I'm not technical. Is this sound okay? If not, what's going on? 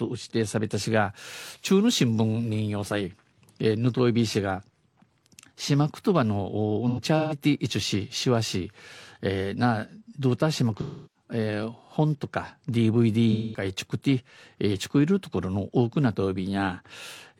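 No. AAC frame loss with concealment hits at 6.88 to 7.35 s, 10.81 to 11.24 s and 13.32 to 13.64 s. Bits of the compressed speech went missing, and the player filled each gap by reusing the last good sound, leaving brief smeared, noisy patches.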